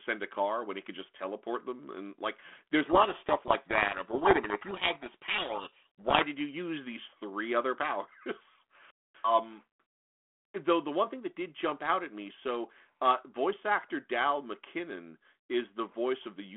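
Speech over a narrowband phone line cut off around 3.4 kHz, with the faint graininess you'd expect from 32 kbit/s G.726. From 2.86 to 6.25 s, between "like there's" and "did you use these", there's a codec payload misread. The speech gets buried under harsh, rasping distortion because the decoder is unpacking the G.726 code words with their bits in the wrong order, so every predicted step comes out wrong until both ends agree again.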